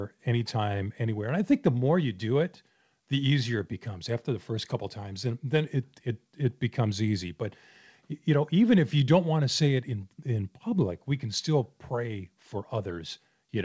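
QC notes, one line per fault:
No faults found in this speech clip. It has been through a call path, and nothing is heard above 8 kHz, which fits a wideband call codec such as G.722.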